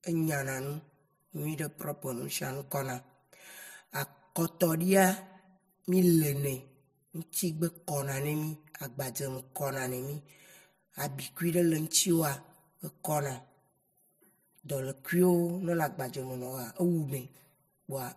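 Speech with channel delay (comb filtering) all the way through: one side lags roughly 5 ms, so the mono sum notches out from around 100 Hz upward, sounding hollow and phasey.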